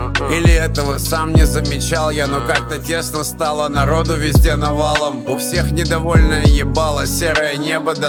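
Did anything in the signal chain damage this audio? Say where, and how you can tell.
No, nothing along the chain seems to have harmed this audio; it just sounds the way it should, with no stage leaving a mark you could point to.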